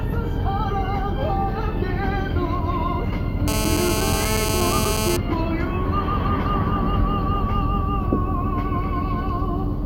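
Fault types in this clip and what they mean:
GSM phone buzz: a nearby 2G phone on a call, rectified at about 217 Hz, giving a steady raspy buzz with harmonics from 3.48 to 5.17 s, only about 3 dB below the sound.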